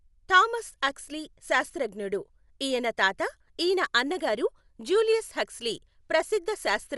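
Throughout the speech the sound is dull, with nothing above 11.5 kHz, and a rough, fluttering noise clings to the voiced tones. The likely cause is Dolby Digital compression at a low rate, around 64 kbps. The encoder narrowed the band and left many frequency lines without detail, which the decoder filled with noise.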